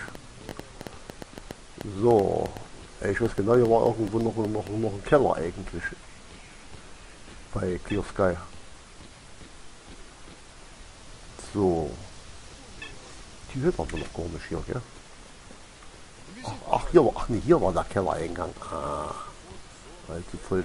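Something in the signal chain, likely interference from nearby equipment or a faulty connection or power supply, injects a train of clicks from 0.08 to 4.68 s. Pulses of much the same shape arrive at an uneven pace averaging about five per second, roughly twenty in all, peaking around 10 dB above the surrounding sound. They come through as irregular ticking and popping laid over the audio, audible in the quieter gaps as well.

At 12.38 to 12.40 s a repeated buffer occurs. Fresh audio failed to reach the playback device in time, so it replayed the block it had just played. The repeated stretch is about 20 ms long, which fits a 20 ms buffer. It sounds twice, once extra, with a hard join at the repeat, and nothing is lost. The result is a brief click-like stutter.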